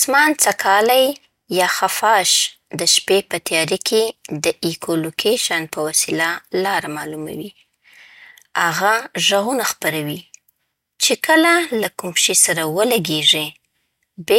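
Speech recording with no technical faults to be heard.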